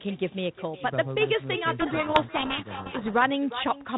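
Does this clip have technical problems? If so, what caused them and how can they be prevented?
Yes. The far end is playing the call on a loudspeaker with no echo canceller, so its microphone sends the audio straight back. Throughout the speech, a thinner copy trails about 0.4 s behind, about 13 dB quieter. Enabling acoustic echo cancellation on that device, or using a headset there, prevents this.

From 1.8 to 3.14 s there is a codec payload misread: the receiver unpacks the G.726 code words in the wrong bit order, so the decoder builds the signal from scrambled values and the speech is buried in harsh distortion. Before and after, the light coding matches 32 kbit/s G.726. Making both ends negotiate the same G.726 packing convention prevents it.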